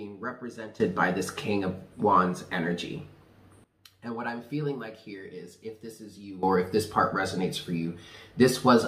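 A gain setting was likely applied without a ramp, causing a sudden gain jump at 0.8 s (about 15 dB) and 6.43 s (about 14 dB); sound and background noise jump together, dropping back at 3.64 s.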